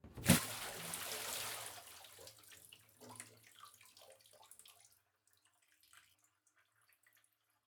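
At 0.35 s, 4.34 s and 6.11 s, compressed frames are skipped: whole 46.4 ms frames go missing, so the audio jumps ahead by roughly a third to half a second.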